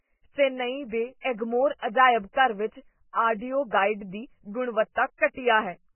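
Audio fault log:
Throughout – Vorbis compression: the speech is dull, with nothing above 3 kHz, and grainy and hissy where the treble should be, with smeared consonant attacks. That's likely heavy Vorbis coding, consistent with a very low bitrate around 9 kbps, trading fine detail for coarse noise.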